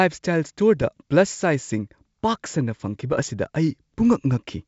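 Bit errors on an ADPCM link hit from 0.77 to 0.88 s and from 3.13 to 3.28 s as pops and rough bursts. Unlike packet-loss gaps, the speech never drops out: flipped bits upset the step size, briefly jolting the level.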